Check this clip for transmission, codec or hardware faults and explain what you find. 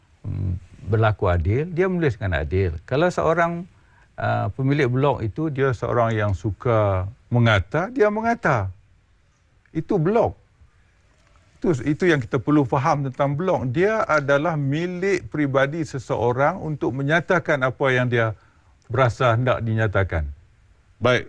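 One fault is present: a wrong sample rate from 5.58 s to the end. The samples are played slower than recorded, with no conversion, which fits 24 kHz audio played at 22 kHz. Speed drops to 0.919 times and pitch falls about 1.47 semitones. Unlike a pitch shift or time-stretch, both change together.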